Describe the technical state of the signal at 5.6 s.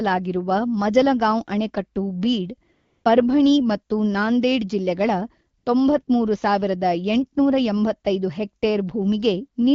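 At 5.6 s there is AMR comfort noise, from 5.57 to 5.65 s, about 80 ms. The sending phone judged the line silent and stopped transmitting speech frames, so the receiver filled the gap with synthetic noise built from a rough level-and-spectrum estimate. It sounds like a brief, steady hiss replacing the real background. On a spectrogram the natural texture gives way to a smooth, uniform band. In the waveform it shows as flat, even-amplitude noise with clean edges.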